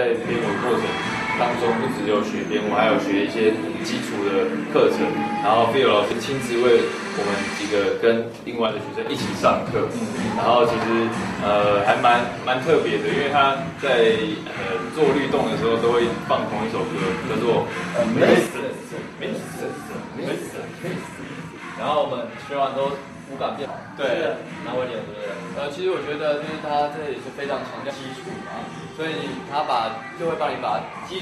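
At 6.11 s a brief glitch marks damaged data in a compressed stream: corrupted frames make the decoder lose sync. From 8.66 to 9.06 s, and again from 18.47 s to the end, the level drops abruptly by about 6 dB, most likely because one channel drops out before the mono sum. Similar blips recur at 19.95 s, 23.64 to 23.66 s and 27.89 to 27.91 s.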